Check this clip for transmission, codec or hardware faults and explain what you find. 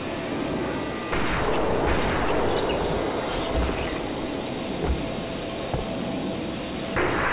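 One fault runs through the whole clip: aliasing. The audio appears to have been downsampled without an anti-alias filter, consistent with a drop to 8 kHz. Content above the 4 kHz fold point mirrors back down as unrelated, gritty, metallic tones, at a fairly strong level, roughly 15 dB below the signal.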